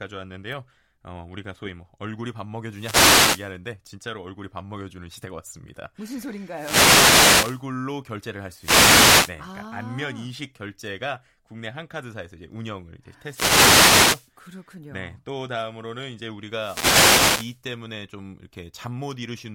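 Speech picked up through an analogue FM radio microphone suffers wireless microphone noise hits: the received signal fades, letting receiver noise swell into short swishes of static at 2.68–3.56, 6.50–7.66, 8.57–9.36, 13.22–14.32 and 16.52–17.62 s.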